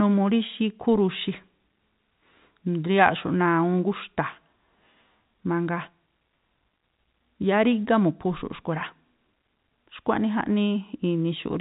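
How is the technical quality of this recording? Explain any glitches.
The recording has no glitches to explain.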